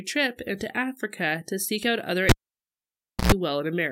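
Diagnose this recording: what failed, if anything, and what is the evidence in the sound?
A cable pulled and plugged in at the analogue wiring stage: a pop at 2.29 s, then about 0.98 s of near silence, a burst of 60 Hz mains buzz lasting about 0.11 s, and a second pop as the speech returns at 3.32 s. The connector was pulled from a live input and reinserted, and the buzz is hum picked up while the contact was incomplete. The waveform shows a spike, a near-flat stretch and a spike. The spectrogram shows vertical broadband lines at both pops and a short band at 60 Hz within the gap.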